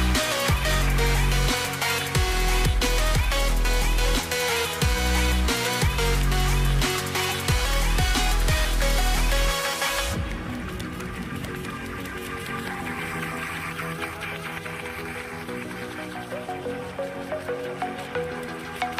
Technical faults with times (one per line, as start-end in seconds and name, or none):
none